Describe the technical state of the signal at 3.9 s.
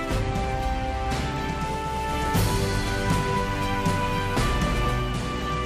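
At 3.9 s you're right in the middle of a digital radio blending to analogue stretch, which runs from about 1.71 s to 5.35 s. The receiver lost its digital stream and cross-faded, over roughly half a second, to the station's FM feed, so there's a hiss floor around 35 dB down and a level shift of about 3 dB.

Under all of that there's a mains buzz that runs the whole clip. Switching spikes twice per cycle on a 60 Hz supply have leaked into the chain, spraying harmonics up into the kilohertz range, so it comes across as a steady, raspy buzz sitting only about 20 dB below the signal.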